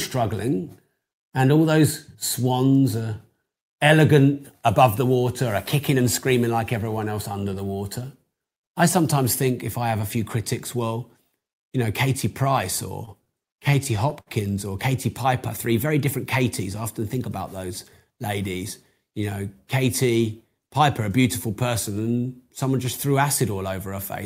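A speech recording that drags and stutters between 13.05 and 14.29 s, with ten brief hitches, the longest 62 ms, together adding about 150 ms. These are repeated stalls (stutter): packets arrived late, the jitter buffer kept emptying, and the receiver stretched the last sound until playback resumed, so nothing is lost.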